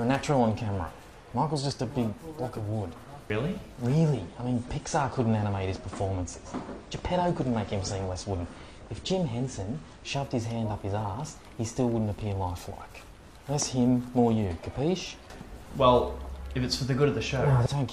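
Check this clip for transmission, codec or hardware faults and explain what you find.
One fault: an adaptive stream at a lower bitrate from 4.15 to 10.15 s. The player switched to a leaner encoding, pointing to roughly a third of the original bitrate, so the codec discarded everything above 9.8 kHz. Treble collapses abruptly, artefacts thicken, and no gap occurs.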